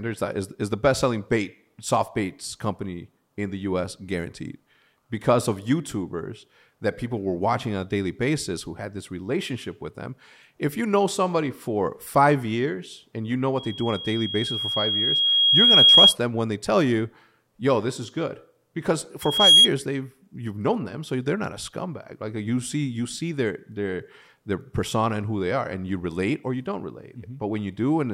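From 13.57 to 16.16 s a loudspeaker feedback squeal rises through the speech. The microphone is hearing its own loudspeaker, and at 3.3 kHz the loop gain tops unity, so that tone feeds itself, swelling over roughly two seconds to about 15 dB above the voice. It returns from 19.21 to 19.69 s, climbing within a fraction of a second. A spectrogram shows a bright, thin horizontal line at 3.3 kHz, and the waveform envelope balloons.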